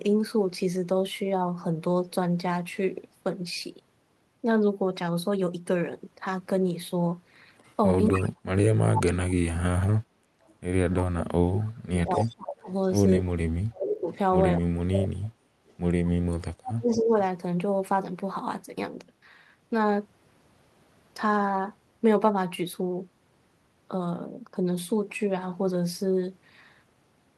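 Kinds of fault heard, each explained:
Echo leak: A delayed copy of the speech, about 241 ms behind, comes back through the far side, likely from a loudspeaker echo the canceller failed to remove. Stronger bursts sit only about 5 dB below the speech, and fainter scraps are much quieter. The fixed lag is what distinguishes it from reverberation.
Speech suppressed in double talk: Between 8.11 and 17.16 s, while the echoed sound overlaps the talker, the speech dips or cuts out in pieces for roughly five seconds in total, at worst by around 40 dB. This is likely the canceller turning down both its own talker and the loudspeaker echo at once, which a network dropout would not track.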